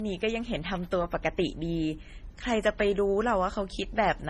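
Speech that carries layered lossy coding damage from start to finish: a hard ceiling at 14.6 kHz with nothing above it, plus swirly, watery high-frequency smearing overlaid with a second, different graininess. The likely cause is transcoding between lossy codecs, with the second encoder spending its bits on the first one's artefacts. The sound suggests an MP3 pass at a low bitrate such as 32 kbit/s, then AAC-LC at a similar rate. On a spectrogram the top edge is flat at 14.6 kHz, and the bands just below it are patchy and blocky.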